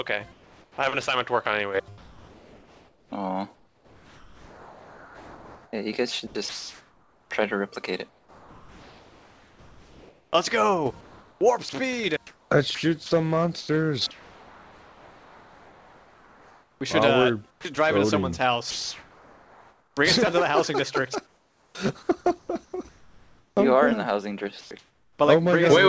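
From 0.32 to 0.78 s the sender most likely stopped transmitting during a pause, and the receiver filled it with comfort noise in place of the background. The real ambience, about 32 dB below the loudest sound, gives way to a steady, featureless hiss about 4 dB quieter for 460 ms.

Between 1.98 and 17.77 s the voice detector likely kept switching transmission on and off, producing sound chopped by the voice detector. About 10.2 s in total were replaced by synthetic fill, so quiet parts and edges drop out.

From 18.71 to 19.97 s comfort noise again likely stands in for the background, this time about 1 dB louder than the real ambience and equally flat and detail-free.

From 21.27 to 23.57 s comfort noise likely replaces the background in stretches totalling about 1.34 s. At 21.72 s the detector was likely slow to react to returning sound, an onset clipped by the voice detector. The first 30 ms went untransmitted, so the sound begins abruptly, missing its soft start.

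At 24.61 s the detector likely mistook quiet sound for background, and the sound was dropped by the voice detector. About 80 ms of sound were lost in a 100 ms gap filled with noise. From there comfort noise replaces the background until 25.19 s, for 500 ms in all.

Throughout, the call path passes nothing above 8 kHz, which fits a wideband call codec such as G.722.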